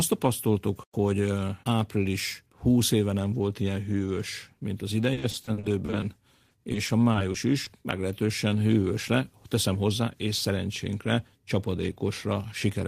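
Repeated packet loss (robotic sound) hits this speech clip from 5.13 to 6.04 s, right after "ilyen hűvös mint az", and again from 6.48 to 7.68 s. Lost packets are patched by extending the previous sound, giving a choppy texture. Nearly a third of the first stretch is concealed, with gaps up to 40 ms. The second stretch is lighter, with gaps up to 20 ms. A jitter buffer speed-up follows from 9.67 to 10.51 s. The receiver trims pitch-period slices, around 70 ms in total, to shrink its backlog, so the voice runs about 8% fast at unchanged pitch and sounds hurried.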